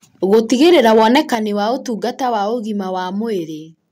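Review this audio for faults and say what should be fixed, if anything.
Microphone overload from 0.32 to 1.35 s: peaks running about 5 dB too hot were flattened at the converter's ceiling, likely from excessive input gain. The harsh crackle follows the loudest syllables, unlike codec distortion, which smears across everything.

Microphone volume stepped down at 0.34 s (about 3 dB), 1.35 s (about 7 dB) and 3.39 s (about 2 dB): speech and background drop together in a single step, likely the call software cutting device gain after clipping. This differs from a fade or compressor pumping.

To prevent both, set the microphone input lower from the start and turn off automatic gain control.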